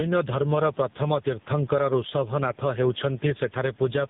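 Throughout the speech, the level pumps. Background noise sits about 37 dB below the speech, and the gain swings by roughly 10 dB, pulled down on each loud sound. This gain pumping is likely caused by excessive input gain with a fast limiter clamping down.

Also throughout, tandem speech coding is audible. The sound has passed through two low-rate speech coders in succession, the second re-encoding the first's already degraded output. Nothing survives above 3.8 kHz, and the speech sounds muffled, rough and warbly, consistent with a GSM-type coder followed by AMR-NB.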